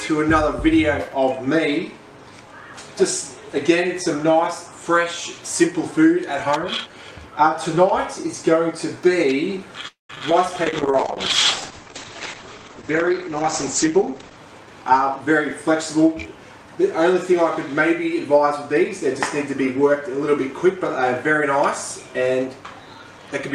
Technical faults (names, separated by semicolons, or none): long network dropout; short concealed packet loss; call bitrate drop; jitter buffer slow-down; jitter buffer speed-up